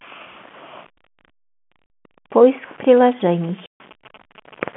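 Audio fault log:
Throughout: low bit depth without dither. Grainy, gritty distortion rides on the speech and changes with it, roughest in quieter stretches. The likely cause is rounding to about 7 bits with no dither, leaving error that tracks the signal and sits roughly 30 dB down.
1.86–1.90 s and 3.66–3.80 s: packet loss filled with silence. The speech is cut by hard-edged holes of 40 ms and 140 ms. Lost packets were replaced by silence, and these gap lengths fit a 20 ms packet size.
2.97–4.63 s: GSM signalling bursts. A galloping dit-dit-dit of short buzzes sits about 25 dB below the speech. A nearby 2G phone's signalling bursts are being rectified by the audio circuit, giving the characteristic buzz near 217 Hz.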